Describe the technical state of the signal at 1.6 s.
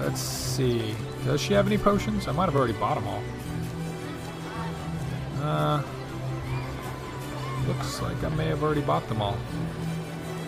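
At 1.6 s the signal is intact, with no dropout, clipping, glitch or other fault audible at that moment.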